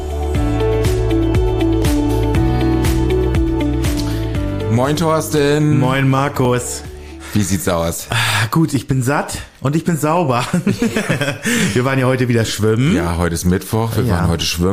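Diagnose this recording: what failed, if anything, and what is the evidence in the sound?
Looks like a driver or buffer problem. There's a regular click about every 2.31 s, from 1.82 s to 13.4 s, roughly seven in all. That steady spacing points to clock drift buffer slips, likely two clocks disagreeing by a few hundred ppm, with a few dozen samples dropped or repeated at each slip.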